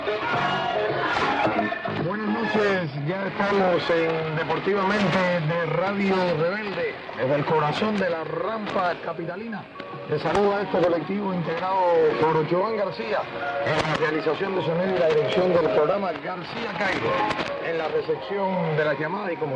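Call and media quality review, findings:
No audible faults found in this recording.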